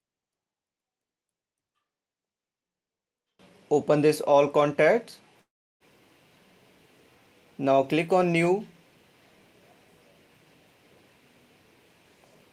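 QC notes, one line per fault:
5.41–5.83 s, call audio freeze: the sound smears into a short fading buzz, then drops to silence for about a third of a second before picking up exactly where it left off, with nothing skipped, so everything after arrives roughly 0.39 s late. This pattern likely comes from packets held up in transit, leaving the jitter buffer empty while the receiver stretched out the last sound and then waited.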